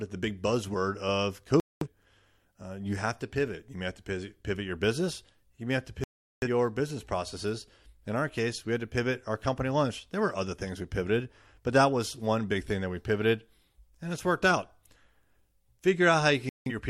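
Speech drops to silence three times: from 1.6 to 1.87 s, from 6.04 to 6.48 s (the longest hole), and from 16.49 to 16.72 s, each time resuming mid-stream with the missing stretch simply gone. This is digital broadcast dropout. The receiver lost the signal or rejected corrupted frames and muted its output until valid frames arrived again, so each gap fits the loss of a short run of frames.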